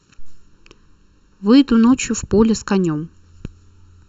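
One channel of this speech recording arrives roughly 0.7 ms behind the other, and the two are summed to mono. The result is channel delay (comb filtering) from start to finish. Content common to both channels cancels where the offset equals half a cycle. The first notch sits near 700 Hz, with further notches near 2.1 kHz, 3.5 kHz and upward, spaced about 1.4 kHz apart. The voice sounds hollow and phasey, with a fixed coloration that never moves.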